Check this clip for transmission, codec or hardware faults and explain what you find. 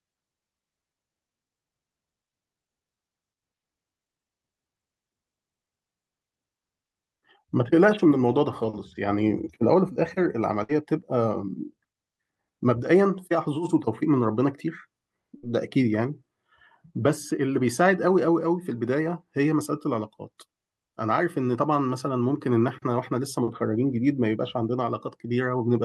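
Two bursts of packet loss occur, at 10.63 to 10.72 s and 15.37 to 15.46 s. Each time the receiver extends the last sound for roughly 55 to 60 ms, fading it as a held buzz or hiss. About 60 ms of speech is then skipped before playback resumes.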